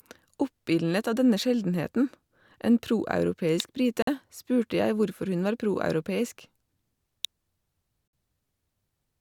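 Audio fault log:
3.60 s and 7.25 s: electrical switching spike. Each time a sharp snap sits on top of the speech, over in about 2 ms or less, too brief and too hard-edged to belong to the talker. The likely source is a nearby switch, motor or static discharge arcing and coupling a burst of energy into the audio line. Because the arc is so short and broadband, it is heard as a click rather than a tone.
4.02–4.07 s and 8.08–8.13 s: gap between stream segments. The speech drops out abruptly into silence for about 50 ms and then about 55 ms, with hard edges at both ends. The two holes fall roughly 4 s apart, which fits the timing of segments about 2 s long. At these joins the time stamps leave a small gap that the player fills with silence, so the sound stops and resumes cleanly. No audio is missing. The clip simply gains that extra silent time.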